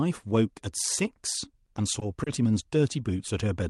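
Repeated stalls (stutter) run from 1.65 to 2.28 s in this speech recording. Over that stretch the delivery halts four times, with the longest hold lasting about 30 ms and roughly 70 ms stretched in total. That is about 11% of the span, with nothing actually lost. The jitter buffer kept draining because packets arrived late, and each time the receiver extended the last sound until fresh audio arrived. That is why the talk drags and hiccups rather than dropping out, heard through a call path whose Opus coding tops out near 12 kHz.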